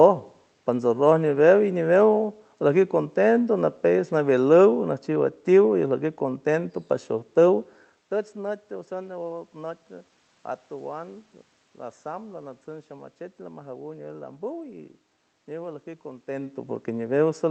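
No technical faults can be heard anywhere here.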